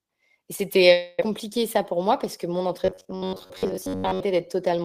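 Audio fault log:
0.92 to 1.20 s: long network dropout. The speech stops arriving and the gap is papered over with a continuation of the last sound, a fading buzz or hiss lasting about 0.26 s. About 0.2 s of real speech never plays. No true silence follows before the audio resumes, and it picks up further along, missing that stretch. The delay also shifts by roughly 70 ms. The likely cause is a burst of lost or late network packets.
1.77 to 2.68 s: jitter buffer speed-up. The speech runs at 105% of normal speed with the pitch unchanged. It sounds slightly hurried. The receiver was holding more audio than it wanted. To catch up, it cut out many small pieces, each one or a few pitch periods long, about 50 ms in all. Because whole pitch cycles are dropped, the tone stays the same while the timing tightens.
2.85 to 4.20 s: robotic sound from repeated short buffers. The speech turns into a rigid, metallic buzz at 93.8 Hz that still loosely follows the speech. 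Roughly 70% of what is heard here is repetition. A tiny slice of about 10.7 ms is looped over and over while the real audio is skipped. That loop length sets the fixed buzz pitch. The likely cause is audio reaching the player too seldom, so it recycles its last buffer.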